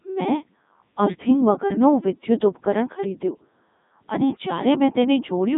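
From start to finish the speech has passed through a Codec 2 vocoder, with heavy damage, at a quality that points to its top mode of about 3.2 kbit/s. Only pitch, voicing, energy and a coarse spectral envelope survive, and the decoder rebuilds the voice from sine waves, so it sounds robotic and buzzy. A spectrogram shows tidy synthetic harmonics confined to roughly 200 Hz to 3.7 kHz and nothing above 3.8 kHz. The waveform bears no sample-level resemblance to natural speech.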